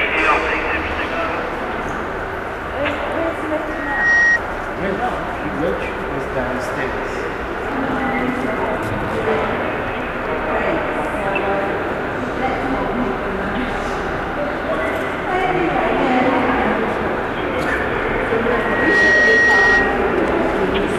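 At 3.66 s a loudspeaker feedback squeal starts. A microphone is picking up its own loudspeaker, and at 1.9 kHz the loop gain exceeds one. The tone swells within a fraction of a second, sits a few dB above the audio, and ends at 4.39 s. It returns from 18.38 to 20.17 s, building more slowly, in under a second.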